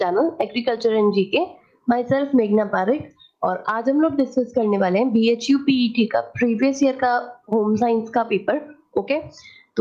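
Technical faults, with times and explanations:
Throughout, gain pumping: the gain swings by around 10 dB, rising between loud sounds and pulling down on each one, likely a fast limiter fighting excess gain, unlike gating.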